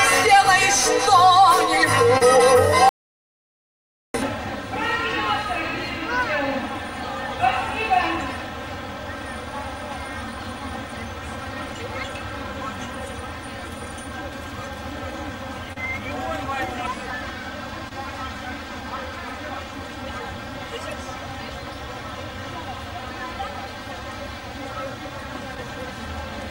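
Right at 2.17 to 2.23 s there's a short concealed packet loss. About 40 ms of the stream never arrived in time, and the decoder papered over roughly 34 ms of it by stretching out the preceding sound before easing back into the real audio. You hear a quick smear or little wobble rather than a clean gap.

Then from 2.89 to 4.14 s the audio drops out to silence for about 1.25 s. It's plain silence, with no room tone underneath, and the sound cuts off and comes back mid-flow. That points to the input going away for a moment, most likely a device or link disconnecting, while recording carried on writing nothing.

The concealed packet losses come back later. At 15.73 to 15.78 s about 40 ms went missing and around 31 ms was filled. At 17.89 to 17.93 s a 20 ms hole was fully patched. At 25.55 to 25.66 s only half of a 20 ms loss was concealed, and a few extra milliseconds of stretch crept in. Each one is a brief smear or wobble where the decoder was guessing.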